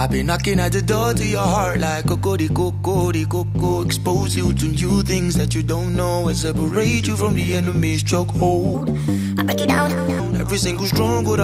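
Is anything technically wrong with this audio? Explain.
Yes. From 8.75 to 10.20 s the sound suddenly turns bright and rushed, running one and a half times too fast and sitting about seven semitones higher than the rest of the clip, before snapping back to normal. This is a wrong sample rate fault. The samples in that section are played out faster than they were captured, with no conversion, so pitch and tempo rise together by the same 1.5 ratio. That ratio fits 32 kHz material being played at 48 kHz.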